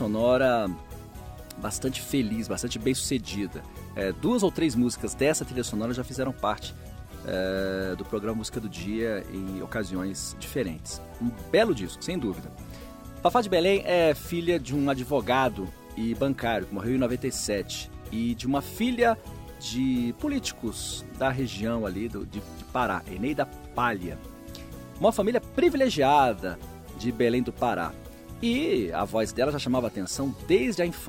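No technical faults can be heard anywhere in the audio. Nothing in the sound calls for a time or a cause to be noted.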